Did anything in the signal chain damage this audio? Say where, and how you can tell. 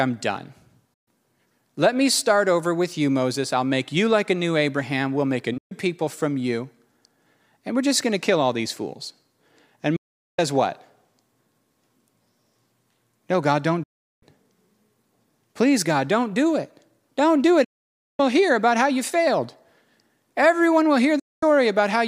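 Yes. The speech suffers a digital broadcast dropout at the receiver, six times: 0.94 to 1.08 s, 5.58 to 5.72 s, 9.96 to 10.39 s, 13.83 to 14.23 s, 17.64 to 18.20 s, and 21.19 to 21.43 s. Each gap fades to silence in about 8 ms, then sound returns further along. The holes run from 128 ms to 544 ms, all multiples of 32 ms, which fits whole frames failing their check and being muted. The missing audio is gone.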